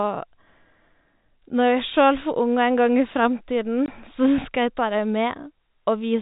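One packet of this speech clip was lost in transit, and the receiver, rather than concealing the loss, played silence in its place, which is packet loss filled with silence. The result is a single 20 ms hole from 3.86 to 3.88 s, consistent with one 20 ms packet going missing. Because the audio drops to silence abruptly and resumes just as abruptly, the gap has hard edges. The sound also carries the 4 kHz ceiling of G.711 telephone coding.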